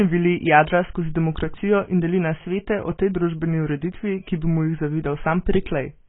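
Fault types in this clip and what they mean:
AAC compression: the speech has nothing above 3.7 kHz and a smeared, warbling texture throughout, unlike a clean low-pass, likely from heavily compressed AAC-LC near 16 kbps.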